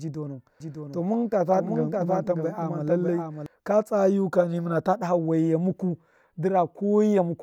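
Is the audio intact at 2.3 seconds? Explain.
No. From 0.60 to 3.46 s the speech carries a doubled audio track: a full-band copy trailing by roughly 0.7 s, somewhat quieter, likely from a second, slower capture path. A spectrogram shows the same patterns repeated, starting and stopping abruptly.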